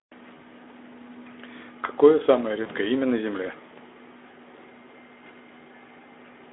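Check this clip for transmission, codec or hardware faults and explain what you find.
Two short dropouts are audible in the speech. VoIP packet loss concealed by the speech codec, 0.37 to 0.41 s and 2.63 to 2.70 s: each sounds like one lost 20 ms frame, rebuilt by extrapolating the previous pitch and filter. The result is a brief smear that lingers weakly after packets resume. The Speex narrowband line, about 300 Hz to 3.5 kHz, carries light codec colouring.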